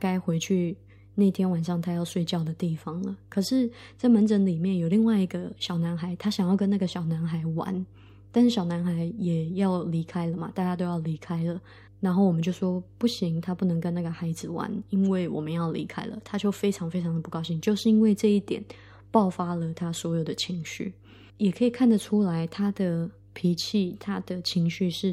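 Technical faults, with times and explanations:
Throughout, mains hum: a steady low tone at 50 Hz sits under the speech for the whole clip, roughly 25 dB below it, with some low harmonics. A ground loop or nearby transformer is letting the power line leak into the signal path. Unlike rumble from handling or wind, it holds one fixed pitch and never swells or drifts, and unlike a buzz it lacks a dense ladder of bright upper harmonics.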